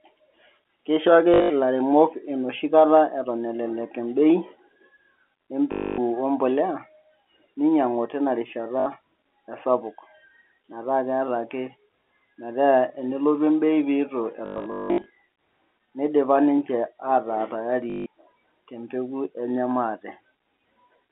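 A speech recording over a telephone-band line, with packet loss with last packet repeated at 1.34, 5.72, 8.8, 14.46 and 17.9 s. Each gap is filled by a repeated fragment, which fits 20 ms packets, giving a 50 Hz robotic buzz rather than the silent dropouts of plain loss.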